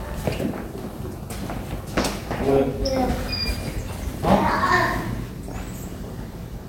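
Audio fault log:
1.98–2.64 s, 3.74–4.18 s and 5.48–6.15 s: DAB burbling. In each stretch, weak reception lets bit errors of roughly half a percent to one percent slip past error correction into the MP2 data, worst in the last burst. Corrupted samples put short blips of noise in single sub-bands, and corrupted scale factors make individual sub-bands leap in level for up to a frame, giving watery blips or a bubbling, squelchy chirping over the sound. On a spectrogram this shows as scattered short rectangular blocks confined to single frequency bands. The waveform shows brief erratic bursts rather than clean clicks.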